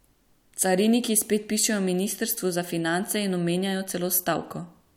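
Listening to the speech recording, nothing stood out as a technical problem.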